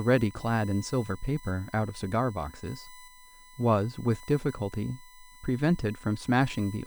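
Speech with USB whine throughout: a fixed 1 kHz tone about 25 dB down, set by the bus's 1 ms frames rather than mains hum.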